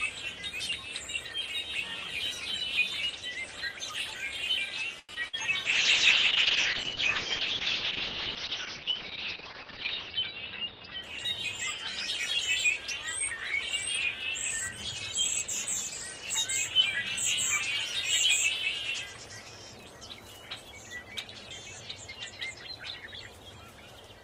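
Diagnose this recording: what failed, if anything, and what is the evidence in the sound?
Network side, short stall from a late packet: at 4.99 to 5.11 s the sound just hangs, stretched about 94 ms while the jitter buffer waited, and then carries on with nothing lost.

Also network, a short concealed packet loss: at 5.15 to 5.18 s there's a tiny smear where roughly 20 ms never arrived and the receiver papered over it.

Network again, a burst of packet loss: 5.28 to 5.35 s turns into a fading fill, then the audio jumps ahead with about 80 ms gone.

Codec stage, a call bitrate drop: from 5.66 to 11.08 s the encoder falls from 32 to 6 kbps and the top end is cut from 20 kHz to 6 kHz. It sits at its worst for about 4.4 s and sounds dull and watery.

Jitter buffer slow-down: between 8.76 and 9.37 s the sound plays at 95% speed with the pitch unchanged, as the buffer stretches things by 37 ms to rebuild its reserve.

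Jitter buffer speed-up: 10.09 to 10.88 s runs at 110% with the pitch unchanged, hurried, as it trims about a tenth of a second of built-up delay.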